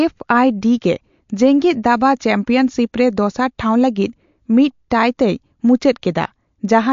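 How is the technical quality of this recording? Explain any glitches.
The recording is clearly degraded by lossy compression throughout, with one audible pre-echo on an attack.

MP3 compression, throughout the clip: the speech has nothing above about 7.2 kHz, so sibilants sound dull and clipped off, and the damage is plainly audible as a watery, swirling texture in the upper range. This is likely MP3 encoding at a low rate, which fits a bitrate around 48 kbps. Starved of bits, the encoder discards the treble and lets weak frequency components flicker in and out between frames.

Pre-echo at 4.90 s, just after "ᱫᱚᱥᱟᱨ ᱴᱷᱟᱣ ᱞᱟᱹᱜᱤᱫ ᱢᱤᱫ": a brief hiss, spread over about 10 ms, leads into a sharp onset. The codec spreads its quantisation noise across a whole transform block, so when a sudden attack sits late in that block, noise sized for the loud part leaks into the quiet moment before it. The result is a smear ahead of the attack and a softened onset.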